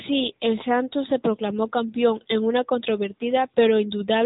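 AMR narrowband mobile codec damage runs throughout: the speech passes through a vocal-tract model coded at a rate that fits 10.2 kbps, nothing above 3.8 kHz survives, and voices sound plainly buzzy and synthetic.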